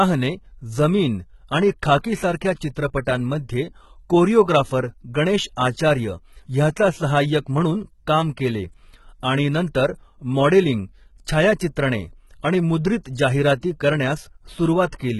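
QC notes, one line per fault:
Throughout, HE-AAC compression: likely a heavily squeezed HE-AAC v2 encode, which fits a bitrate near 16 kbps. The treble is rebuilt from copied lower bands, so sibilants sound gritty and lispy, with nothing above 11.8 kHz.
3.05 s, 5.56 s (just after "कोरिओग्राफर गणेश") and 13.61–13.63 s, pre-echo: the codec spreads block noise ahead of sharp attacks, so a 10 to 20 ms hiss precedes each one and softens it.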